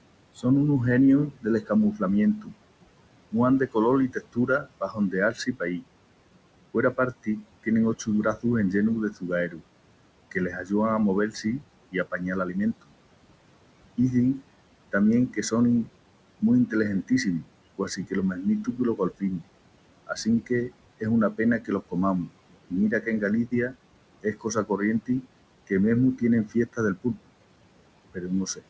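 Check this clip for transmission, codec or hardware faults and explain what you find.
Two faults stand out, both from noise suppression rather than the transmission link itself. The audio is band-limited to 8 kHz, which fits a wideband call codec such as G.722, and the room noise sits about 16 dB below the speech.

Noise suppressor artifacts run through the whole clip. The background pumps down between phrases and swells back under the speech. The suppressor estimates the steady noise in each frequency band and pulls those bands down frame by frame, here by about 21 dB. Because that gain keeps changing, the residue never settles into a constant hiss.

Speech cut by the noise suppressor occurs from 0.35 to 12.94 s and again from 13.97 to 28.62 s. In both stretches, soft consonants, word endings and quieter passages sound swallowed or suddenly faint, adding up to roughly three seconds in each span. 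The suppressor mistook those low-level parts of the speech for noise and turned them down along with the background, by as much as about 22 dB in the first span and about 21 dB in the second.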